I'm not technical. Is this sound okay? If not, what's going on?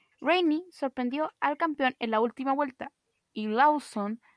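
No. From 2.25 s, right after "al campeón en la", to the end, the speech drops about one and a half semitones and slows to about 92% speed. This is a wrong sample rate fault: audio likely made at 24 kHz is being played back at 22 kHz.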